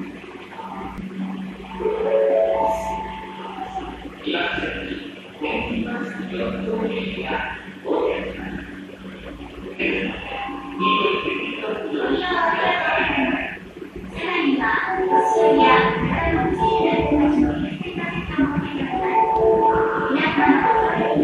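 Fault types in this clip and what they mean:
Damaged data in a compressed stream: Corrupted bytes make the decoder misread frames and lose sync until it finds the next frame header. Each glitch is a brief blip of about 50 ms, at roughly 0.98, 9.76 and 13.52 seconds.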